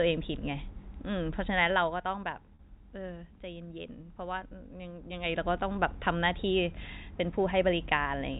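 At 2.55 s the speech holds for about 40 ms, to 2.59 s, as packet loss with pitch repetition: the receiver loops the last pitch period across the gap, which fits four 10 ms packets, giving a brief buzzy sustain rather than the silent hole or click of a plain dropout.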